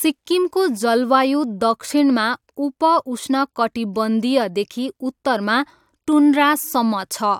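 Nothing stood out on listening to this speech recording.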